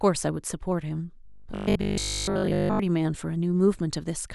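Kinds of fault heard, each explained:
Robotic sound from repeated short buffers: From 1.25 to 2.79 s the speech becomes a rigid, metallic buzz at 50 Hz. Audio likely arrived too seldom, so short blocks were replayed over most of that stretch. The pitch fits a 20 ms block.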